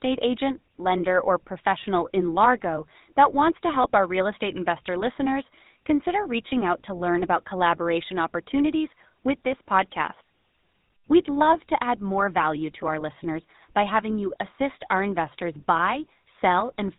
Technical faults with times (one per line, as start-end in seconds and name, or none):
0.00-16.99 GSM full-rate codec
3.82-3.86 lost GSM frames